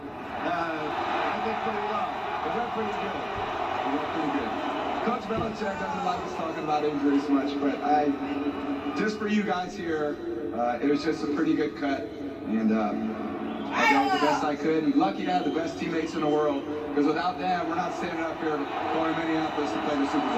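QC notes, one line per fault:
Nothing stood out on listening to the audio.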